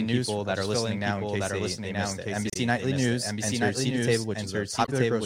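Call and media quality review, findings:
Doubled audio track, whole clip. Second full-band copy of the speech trails by about one second, at roughly equal level. Dry, no room colour. Likely cause: a slower second capture path or an edit holding two out-of-step copies.

Damaged data in a compressed stream, at 2.50 to 2.57 s, right after "they they missed it", and at 4.84 to 4.89 s. Short glitches. Decoder misreads corrupted frames, loses sync, resyncs at the next header.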